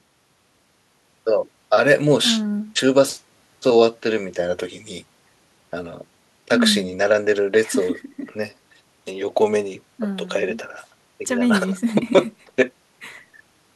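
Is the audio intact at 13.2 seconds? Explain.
Yes, the audio is intact at 13.2 seconds, with no dropout, click, distortion or other fault audible at that moment.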